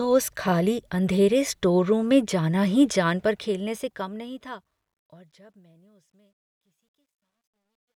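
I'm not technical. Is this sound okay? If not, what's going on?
No. After "में जाना ही जान", from 3.19 s to the end at 7.96 s, there's truncation distortion on a fade. The fade-out is handled too coarsely, likely a 12-bit stage without smoothing, so the speech turns gritty, and from 5.34 s it is at its worst.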